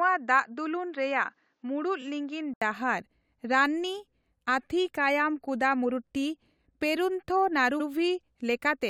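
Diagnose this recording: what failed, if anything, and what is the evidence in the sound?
Input switched to a poorer device, 0 to 2.62 s. For the first 2.62 s the speech is band-limited, with nothing above 7.6 kHz, so it sounds duller than what follows. The low noise floor sits roughly 50 dB under the speech and the loudness barely changes. At 2.62 s an 80 ms gap leads into the full-band sound. This points to a driver or routing stage that likely began on a narrower-band input and then moved to the main device.

Repeated frames at 2.01 s and from 7.79 to 7.86 s. At 2.01 s a 23.2 ms fragment plays twice, which fits one codec frame resent or rewritten. At 7.79 s a 69.7 ms stretch repeats, consistent with a run of about three frames. Each repeat is a short stutter. This is a codec or storage fault, and together the repeats add about 93 ms to the clip.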